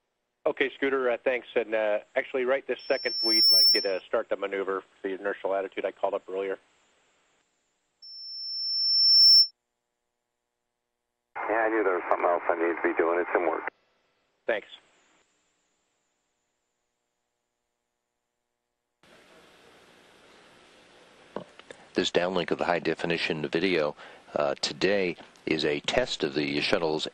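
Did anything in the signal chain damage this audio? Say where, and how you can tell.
Yes: loudspeaker feedback squeal at playback. The microphone re-amplifies its own loudspeaker, so a 5.4 kHz tone swells well above the sound at 2.79–4.02 s and 8.02–9.51 s.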